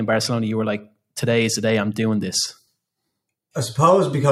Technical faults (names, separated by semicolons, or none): none